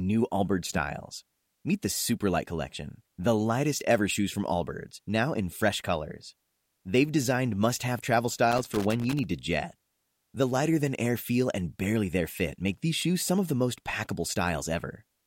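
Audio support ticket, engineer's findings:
Loose connector crackle, 8.52–9.24 s, speech track: irregular scratchy burst, about 0.7 s. Worn or dirty contact making and breaking, chopping signal. Check cable and jack.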